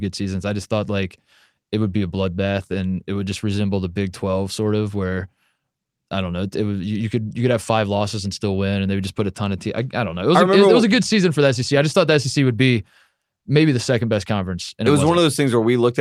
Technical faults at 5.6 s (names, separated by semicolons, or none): none